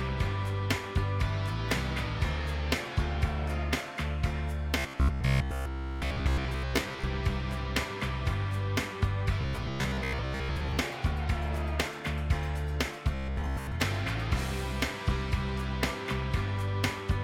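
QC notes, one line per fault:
4.79–7.04 s: robotic sound from repeated short buffers, a rigid 66.7 Hz metallic buzz, likely from a 15 ms chunk looped while most new audio is skipped; spectrogram shows evenly spaced harmonic stripes.
9.41–10.77 s: robotic sound from repeated short buffers, the same 66.7 Hz buzz replacing most of the sound, likely from 15 ms repeats; the waveform shows identical cycles recurring every 15 ms.
13.15–13.72 s: robotic sound from repeated short buffers, a brief 66.7 Hz mechanical drone, likely from looping a 15 ms buffer over most of the span; spectrogram shows a rigid comb at 66.7 Hz spacing.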